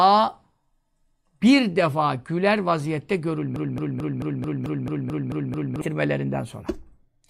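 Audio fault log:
3.56–5.81 s, broken-record loop. A 220 ms fragment of the speech repeats exactly, back to back, ten times. This likely comes from a stalled player or stream resending its last buffered piece. The speech that belonged in those two seconds never plays.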